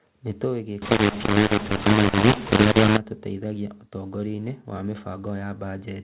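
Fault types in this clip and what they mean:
mu-law and A-law mixed up: from 0.82 to 2.97 s the mu-law speech is decoded as A-law, scrambling sample levels and lifting near-silent samples. The waveform looks jagged and uneven, and the spectrogram shows harsh broadband noise filling pauses below 4 kHz.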